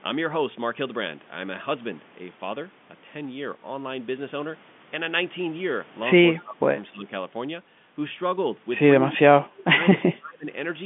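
Speech over a telephone line limited to about 150 Hz to 3.5 kHz, consistent with G.711 mu-law coding, with speech suppressed in double talk at 6.32–6.69 s, 6.9–7.08 s, 8.99–9.69 s and 9.93–10.46 s. The level dips by roughly 15 to 30 dB, deepest in the third stretch, likely because an echo canceller attenuated the talker while the far side spoke.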